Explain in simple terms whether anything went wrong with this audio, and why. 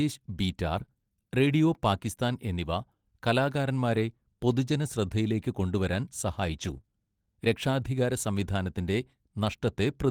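Yes, a few small bits of the speech went missing on the way, and the receiver patched them in two different ways.

Lost packet rebuilt from error correction is heard at 0.77 to 0.83 s, 3.94 to 3.99 s and 6.58 to 6.76 s. Each lost piece had a rough backup copy riding in the next piece, so the sound never drops out. It just turns briefly grainier and noisier for about 40 ms, or about 100 ms in the longest one near 6.6 s.

Short concealed packet loss is heard at 0.85 to 0.90 s, and twice in a row at 6.78 to 6.81 s and 6.81 to 6.85 s. Here no backup arrived, so the receiver guessed, stretching the last sound over a gap of about 20 ms. The difference is that these patches sound like a quick smear or wobble rather than a rough patch, and a short sound can disappear entirely.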